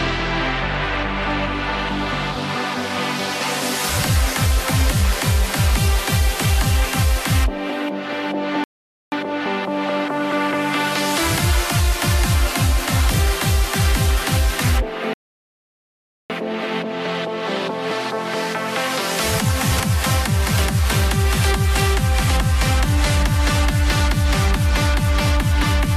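At 8.64 s a rebuffering stall occurs: the player runs out of downloaded audio and waits, so the sound drops to silence for about 0.48 s, then resumes exactly where it stopped. At 13.14 s, chunks out of order: a 20 ms chunk arrives one chunk late and plays after its successor, giving a brief jumbled flicker, through 13.18 s. A second, longer stall runs from 15.13 to 16.30 s, adding about 1.16 s of silence before the audio picks up seamlessly. At 19.72 s another 20 ms chunk plays three chunks late, scrambling the order and producing a garbled moment until 19.8 s.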